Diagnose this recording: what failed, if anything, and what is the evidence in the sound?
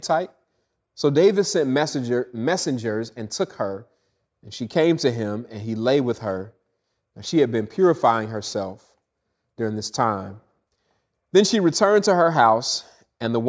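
Converter: sample clock jitter, 5.67 to 9.67 s; microsecond-scale timing errors add hiss roughly 35 dB under the speech, worse on loud passages.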